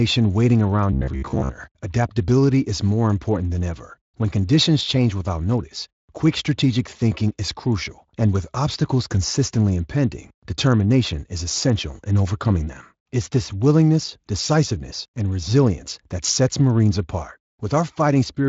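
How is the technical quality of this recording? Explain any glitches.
One glitch stands out, near the start, in a speech recording whose sound stops at about 7.6 kHz, consistent with Speex coding at 23.8 kbps with light damage.

From 0.92 to 1.49 s, just before "adaptability is more important", there is robotic sound from repeated short buffers. The voice becomes a rigid metallic buzz at 66.8 Hz, with most of that stretch made of repeats. The likely cause is audio arriving too late, so the player loops a piece about 15 ms long and the real speech is skipped. Low-rate Speex also gives a hoarse, vocoder-like roughness, but that texture doesn't sit on one pitch. Here the buzz holds a single fixed pitch and lasts only half a second.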